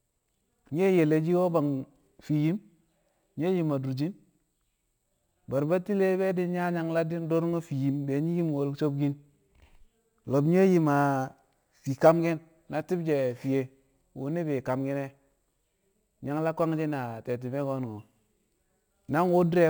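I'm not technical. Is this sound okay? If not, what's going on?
No. Throughout the speech there is imaging from sample-and-hold upsampling. Each sample was simply repeated without smoothing, adding a faint metallic fizz above 12 kHz.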